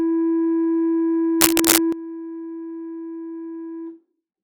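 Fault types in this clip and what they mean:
Sudden gain jump: at 1.92 s the music drops by about 12 dB in a single step and stays down to the end, with any background noise falling by the same amount. The cause is likely a gain setting or bit shift applied without a ramp. On the waveform the envelope steps abruptly to roughly a quarter of its height. On a spectrogram every frequency band dims at once along a sharp vertical edge.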